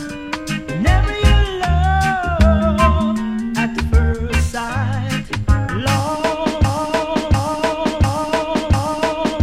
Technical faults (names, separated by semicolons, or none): broken-record loop